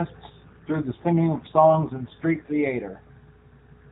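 From 0.3 to 2.64 s the speech turns rougher and more synthetic, with a buzzy edge, though the narrow telephone band and continuity stay intact. This is an AMR rate drop, consistent with the mobile codec stepping down from about 12.2 to 5.9 kbps.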